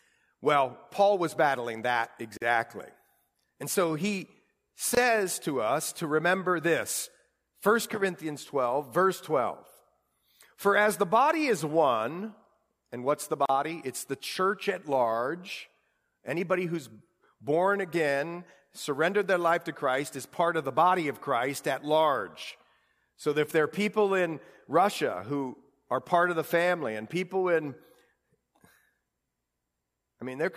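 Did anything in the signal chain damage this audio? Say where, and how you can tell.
Yes. At the codec stage, the speech was encoded in separate pieces and joined without trimming the encoder's start-up delay or the padding on each last frame. The result is a gap at a join of encoded pieces, heard three times: 2.37 to 2.42 s (45 ms), 4.95 to 4.97 s (23 ms), and 13.46 to 13.49 s (38 ms). Each is a brief silence with edges smeared by the codec, after which the speech resumes exactly where it broke off.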